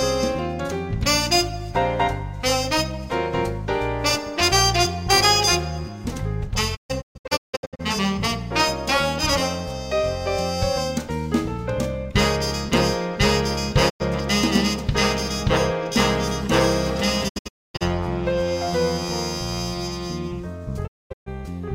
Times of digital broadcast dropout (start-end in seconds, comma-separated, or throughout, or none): 6.75-7.81, 13.88-14.02, 17.27-17.83, 20.86-21.28